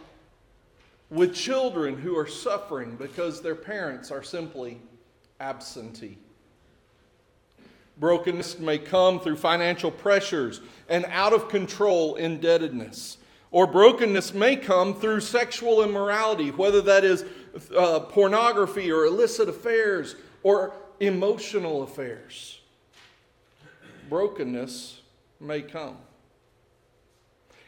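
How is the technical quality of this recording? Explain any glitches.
Four short dropouts are audible, each from compressed frames skipped. At 1.46, 8.40, 11.90 and 14.16 s, whole compressed frames never reach playback, either missing from the file or rejected by the decoder as damaged. The audio jumps ahead by a few tens of milliseconds: roughly 50, 70, 50 and 20 ms, consistent with one to three frames each time.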